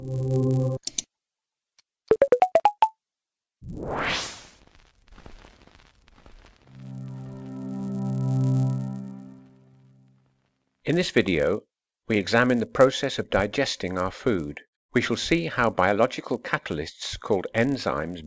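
There's a low buzz riding under the audio for the whole clip, and it's the classic sign of a resampler restarted on every block. The converter worked on 10 ms chunks in isolation, so each edge got filter taps from silence or the wrong end of the block instead of real neighbours. Those little edge errors repeat at 100 Hz, too fast to hear as ticks, so they fuse into a buzz that's only there when there's signal. The dulled top end fits a conversion from 48 kHz down to 16 kHz.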